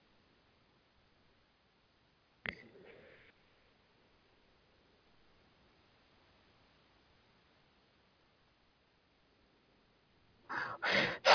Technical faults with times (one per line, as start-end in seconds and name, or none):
none